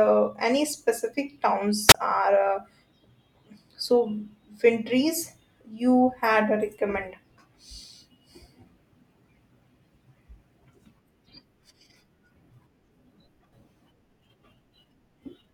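At 1.88 to 1.95 s there is a wireless microphone squelch dropout: the analogue radio link fades, hiss rises briefly, then the receiver's squelch mutes the speech for about 28 ms. That hiss before the gap marks a radio fade, unlike a clean digital dropout.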